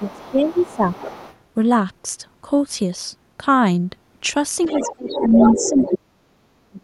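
Right from the start, there's other side's voice leaking through: faint scraps from 0 to 0.32 s and again from 0.51 to 0.76 s, sitting way down under the talker, then a bit stronger from 0.94 to 1.37 s. It's likely the far end playing on a loudspeaker and the echo canceller not scrubbing all of it from the mic. Over the same stretch, 0 to 0.87 s, the talker gets speech suppressed in double talk. The voice sags by roughly 15 dB, probably because the canceller couldn't tell the near voice from the echo and turned everything down.

The big one comes later. From 4.63 to 5.96 s the leak is nearly as loud as the talker, a proper second voice in the mix. Overlapping it, from 4.72 to 6.15 s, the talker's speech is pushed down hard, about 30 dB at its deepest, while the other side talks. Finally, from 6.7 s to the very end, there's another short suppression of about 35 dB.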